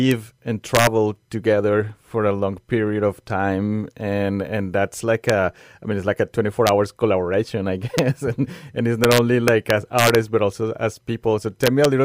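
Integer overflow cracks the speech at 0.11 s, 0.75 to 0.87 s, 5.30 s, 6.67 s, 7.98 s, 9.04 to 10.15 s and 11.64 to 11.85 s. Peaks only about 0 to 2 dB past full scale wrap to the opposite sign instead of flattening, so each produces a violent snap, far sharper than the duller buzz of clipping.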